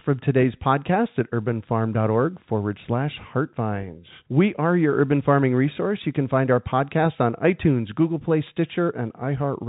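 No technical faults are audible.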